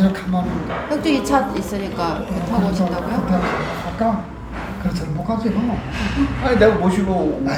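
No technical faults can be heard anywhere in this recording of sounds.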